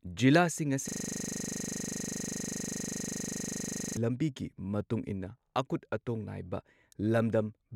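From 0.88 to 3.97 s a system hang loop replays one 40 ms fragment of speech dozens of times, a 25 Hz buzz ending before "ꯃꯇꯨꯡ ꯏꯟꯅ ꯑꯀꯨꯠ ꯑꯇꯣꯡ". The waveform shows identical repeating blocks, and the spectrogram shows vertical stripes every 40 ms with flat, frozen bands.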